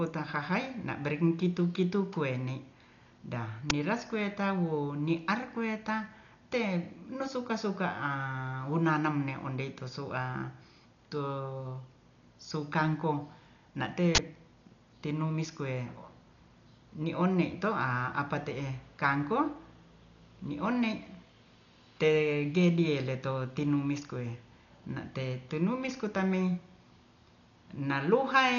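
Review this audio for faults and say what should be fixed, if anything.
The speech is dull throughout, with nothing above 7 kHz and a rough, fluttering noise around voiced tones. This is likely Dolby Digital compression at a very low bitrate. Starved frequency lines get filled with noise. Encode at a higher bitrate to prevent it.

Uninitialised buffer faults occur at 3.7 s and from 14.15 to 14.19 s. The first is a short, loud crack and the second a burst of digital noise, lasting 10 ms and then 40 ms. Stale memory was played as samples. Always fill or zero buffers before playback.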